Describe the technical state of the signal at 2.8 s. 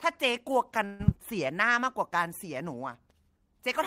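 At 2.8 s the speech signal is intact, with no dropout, clipping, glitch or other fault to be heard at that point.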